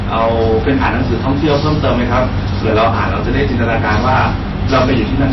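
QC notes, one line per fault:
Throughout, hard clipping: peaks are driven about 11 dB past the limit and cut flat, roughly 7 percent of samples, adding fuzz on loud syllables.
Throughout, MP3 compression: plainly audible watery, swirly artefacts and nothing above 5.8 kHz. This is likely MP3 at a low bitrate, near 24 kbps.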